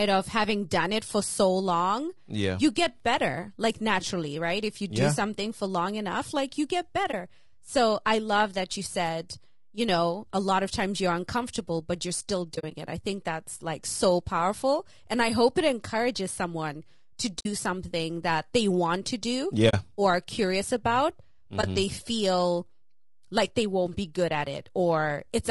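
Low-delay AAC compression affects this speech recording from start to finish. The voice sounds plainly rough and grainy, with noise filling the gaps between pitch harmonics and a top band that sounds thin and synthetic. The likely cause is AAC-ELD coding at a low rate, which fits about 32 kbps. At that rate it has too few bits for the roughly 500 frequency lines it codes each frame. AAC frame loss with muting leaves brief dips and soft-edged holes at 7.11–7.14 s, 12.55–12.72 s, 17.39–17.46 s, 19.69–19.74 s and 21.61–21.64 s. At each one, the decoder zeroed the missing spectrum, and the overlapping windows fade the sound out and back in. The shortest gaps match single 20 ms frames. The 12.55 s damage, between "uncomfortable but you're still" and "it i think that's", scatters about 80 ms of dropouts over 160 ms, with the longest run roughly 40 ms. The gap after "it encourages someone to" lasts 60 ms, and the one after "they want to do" lasts 40 ms.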